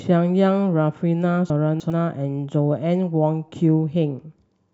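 Chunks out of order between 1.5 and 1.9 s: one 100 ms piece of the speech turns up three chunks late, playing after the material it should precede. Nothing is missing, but the passage sounds jumbled, with three abrupt joins.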